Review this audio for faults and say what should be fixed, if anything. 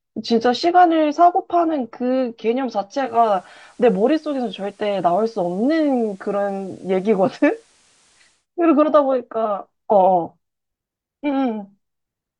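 From 2.97 s to 8.47 s, faint hiss rises under the speech and the level dips about 1 dB. This is digital radio blending to analogue: reception dropped and the receiver cross-faded over 0.23 s to the FM broadcast, then back. Better reception or a stronger antenna would keep the digital signal locked and prevent the blend.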